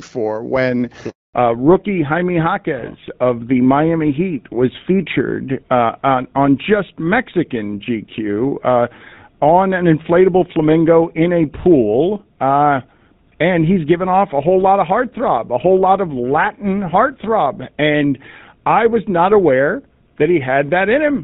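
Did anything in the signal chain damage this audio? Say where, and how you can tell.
Yes. The network stage caused a handover gap. Right after "for when", the sound cuts out from 1.10 to 1.34 s, about 240 ms of silence. During the switch between networks, no speech frames arrived, so that stretch is simply missing.

The codec stage shows a fallback to narrowband. From 1.34 s to the end, nothing remains above 4 kHz, and the sound turns dull and rougher. Before the gap it had HD Voice bandwidth. The change points to GSM full rate replacing AMR-WB.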